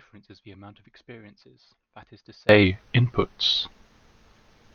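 A speech clip whose first 2.49 s sounds faint, about 28 dB down, the centred voice largely cancelled, most likely from one channel inverted in polarity before mono summing. From 2.63 to 3.55 s the voice slows by 5.6% and drops about a semitone, then snaps back, likely the audible trace of a drift correction step.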